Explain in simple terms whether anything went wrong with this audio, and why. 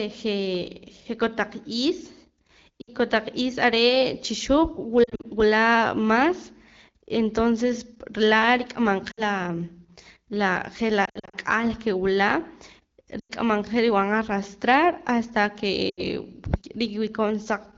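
Lost AMR speech frames cause six brief breaks. They fall at 2.82 s (before "kotaq is"), 5.03, 9.11, 11.06 (before "ak'al ke wula"), 13.19 and 15.89 s. Radio errors spoiled short chunks. The decoder patched them from the last good sound, leaving dips and warbles.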